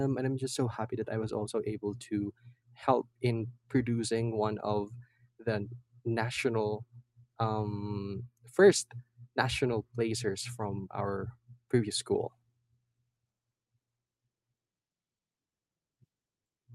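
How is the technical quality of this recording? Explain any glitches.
No glitches or technical faults can be heard anywhere in the speech recording.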